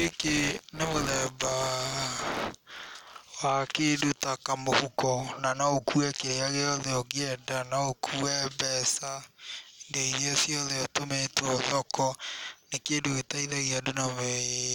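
From 0.0 to 3.16 s, buffer tearing: the ring buffer's writer and reader have slipped, so roughly a tenth of each period replays speech about 20 ms old. An 86.1 Hz robotic rattle, fitting a 512-sample buffer, lasts until "wa kĩndũ ta kamũhuko". The spectrogram shows evenly spaced vertical streaks, and the waveform shows hard steps.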